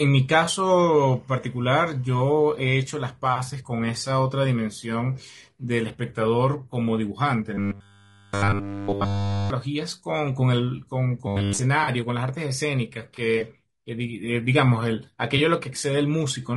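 Across the whole speech clip the sound is rough and grainy, with noise filling the gaps between harmonics and a thin, synthetic top band. This is low-delay AAC compression, likely AAC-ELD at a rate that fits about 32 kbps. Its short frames resolve pitch harmonics poorly, so a spectrogram shows smeared, hazy harmonic lines and a patchy upper band.

From 0.45 to 0.49 s there is AAC frame loss with concealment. A single lost frame of about 20 ms was patched from the preceding spectrum, giving a brief smeared, noisy blip. On a spectrogram it appears as a short vertical band of blurred energy where the harmonics lose definition.

From 0.77 to 2.77 s, timecode bleed adds a faint chirping warble, around 40 dB below the speech. Linear timecode running at 25 frames per second has leaked in as a square wave switching between tones near 1 kHz and 2 kHz. A spectrogram shows two thin alternating lines there, plus their odd harmonics.

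From 7.54 to 9.50 s, and again from 11.27 to 11.59 s, the speech turns into a rigid metallic buzz at 100 Hz. This is robotic sound from repeated short buffers, likely caused by a 10 ms stretch of audio being looped while the real signal was skipped. The waveform shows identical repeating cycles, and a spectrogram shows flat harmonics spaced 100 Hz apart.

Frame loss with concealment returns from 11.83 to 11.89 s, where about 40 ms of the signal is concealed, consistent with two lost frames. This gap is longer, giving a smeared, noisy patch. It returns once more from 15.37 to 15.40 s as a short 20 ms noisy blur, again visible as a brief smeared column on a spectrogram.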